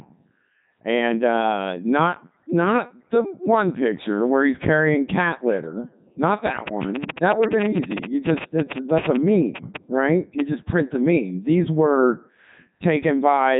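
From start to finish, the speech has gone through a Codec 2 vocoder, likely running at its top 3.2 kbit/s mode. It's rebuilt from sine waves, so it sounds robotic and buzzy, with nothing above 3.8 kHz.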